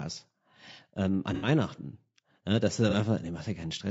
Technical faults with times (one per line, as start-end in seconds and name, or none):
0.00-3.91 low-delay AAC compression
1.34-1.48 AAC frame loss with concealment
2.90-2.94 AAC frame loss with concealment